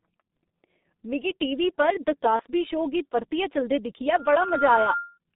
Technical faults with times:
0.00-5.36 G.723.1 codec
2.36-2.42 VoIP packet loss concealed by the speech codec

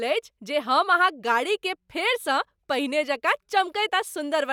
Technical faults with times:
none

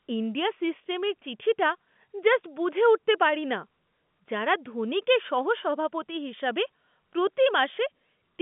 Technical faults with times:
none

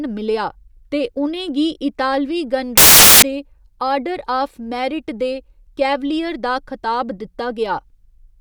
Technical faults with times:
2.77-3.22 samples built from the wrong bytes

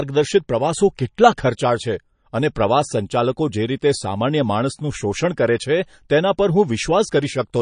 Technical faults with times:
0.00-7.61 MP3 compression

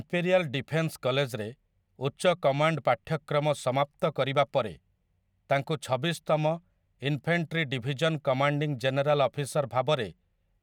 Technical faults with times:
none

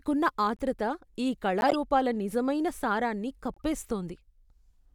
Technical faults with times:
0.56-0.61 corrupt frame decoded
1.61-1.75 corrupt frame decoded
3.54-3.62 corrupt frame decoded

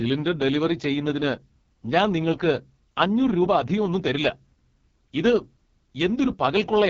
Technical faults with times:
0.00-6.90 AMR wideband (HD Voice) codec

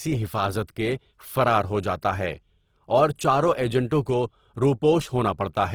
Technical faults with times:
0.00-5.74 Opus compression
3.90 pre-echo

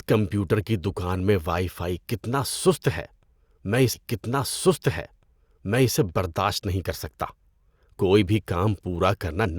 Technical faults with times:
3.93-5.93 stream segment repeated

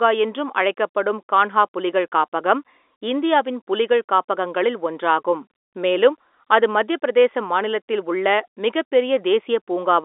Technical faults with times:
none

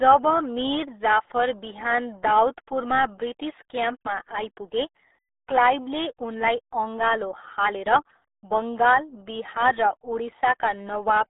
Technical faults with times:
0.00-11.29 RealAudio 14.4 codec

